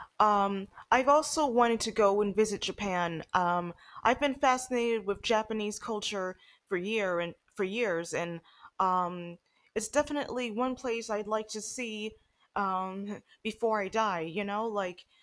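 No technical faults are audible in this recording.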